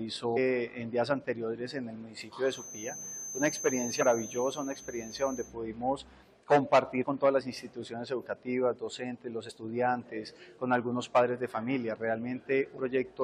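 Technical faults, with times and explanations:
0.36–0.38, 4.01–4.03, 7.02–7.04, 9.49–9.51 and 12.76–12.78 s: damaged data in a compressed stream. Short blips where corrupted frames made the decoder lose sync.
2.41–5.55 s: feedback whistle. A thin 6.2 kHz tone at one pitch that slowly swells and fades, roughly 10 dB below the sound, likely from a loudspeaker-to-microphone loop held just short of runaway.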